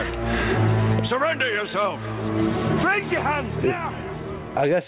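Gain pumping runs through the whole clip, with the gain swinging by roughly 25 dB. Loud and quiet parts sit close together and sound squashed. The likely cause is gain set far too high, with a fast limiter pulling it down. Nothing is heard above 4 kHz, which fits a narrowband call codec such as G.711.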